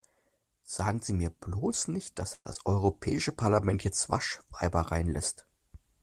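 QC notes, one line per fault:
2.33–2.47 s, call audio freeze: right after "mir bloß nicht dass" the sound stalls for about 116 ms, the last sound stretched into a fading tail with roughly 50 ms of silence, then resumes where it stopped. This likely comes from delayed packets draining the jitter buffer, so a gap is inserted and nothing is lost.
2.53 s, skip ahead: shortly after "mir bloß nicht dass" playback jumps forward, dropping somewhere around 70 ms of audio, with only a brief bridge of about 19 ms. The two sides join almost directly, so part of a sound is cut out and the delay shrinks again.
2.75–3.67 s, jitter buffer slow-down: over this stretch the receiver repeats short pitch periods to rebuild its reserve, adding 72 ms. The audio plays at 93% speed with unchanged pitch, so sounds are slightly drawn out.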